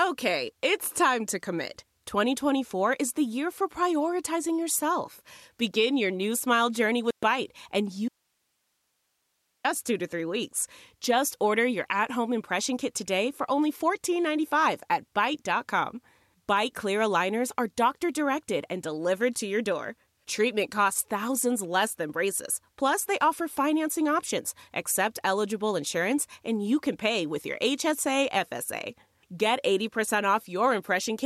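At 7.11 s the speech cuts to silence for 120 ms, until 7.23 s. This is a digital broadcast dropout: the receiver got corrupt or missing frames and muted, which fits about five lost frames. The waveform shows a flat, empty gap, and the spectrogram shows a clean vertical blank band.

From 8.08 s to 9.64 s the speech drops abruptly for about 1.56 s, leaving only faint hiss far below the normal level. This audio dropout to a faint residue is likely a lost signal feeding a path that stayed live. The waveform shows a thin noise floor, and the spectrogram shows uniform low-level broadband grain.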